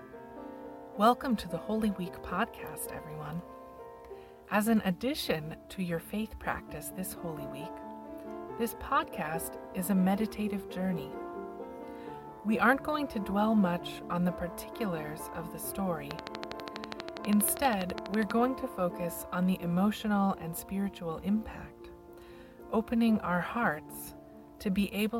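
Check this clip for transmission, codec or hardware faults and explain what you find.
One hardware-type fault shows up: a train of clicks from 16.11 to 18.32 s. Something is likely injecting a repeated electrical pulse into the chain, such as interference from nearby equipment or a faulty connection or power supply. Each pulse adds the same sharp transient, about thirty of them at a steady 12.3 per second, peaking roughly 15 dB above the surrounding sound. The result is an even, mechanical ticking laid over the audio for just over two seconds.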